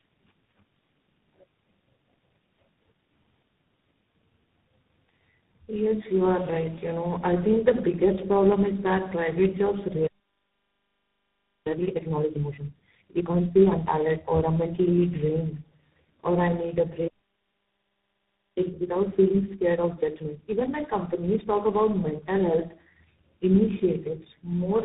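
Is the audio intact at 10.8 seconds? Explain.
No. At 10.8 seconds the audio sits inside a playback stall running from 10.06 to 11.67 s, roughly 1.6 s of silence that starts right after "is that private jobs". The sound cuts off mid-flow and resumes only once output recovers. The likely cause is the player running out of buffered data or its output thread being blocked, so nothing reaches the output until the buffer refills.

The moment is also affected by tandem speech coding, present throughout the clip. The speech sounds rough, muffled and warbly, with nothing above 3.8 kHz. The degradation fits three successive speech codecs with decode and re-encode steps between them, consistent with a chain such as G.729A, GSM full rate and G.726 linked through G.711. Each coder's errors stack onto the previous one's already degraded output.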